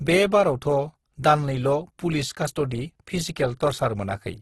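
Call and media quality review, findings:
Speech grainy and rough throughout, few spectral holes and little swirl, nothing above 12.2 kHz. Component: likely Opus compression in music (CELT) mode. Mechanism: starved bands refilled by folding and noise, heavy damage consistent with about 12 kbps; super-wideband limit sets the 12.2 kHz ceiling.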